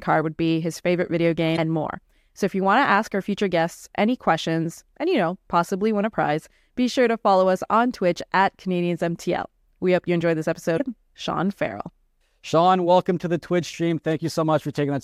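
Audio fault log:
1.53 to 1.59 s and 10.75 to 10.81 s: damaged data in a compressed stream. Corrupted bytes make the decoder misread frames and lose sync while hunting for the next header, giving a roughly 55 ms glitch.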